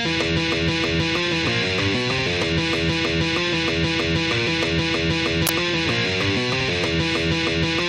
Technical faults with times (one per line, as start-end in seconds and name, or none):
5.47-5.49 uninitialised buffer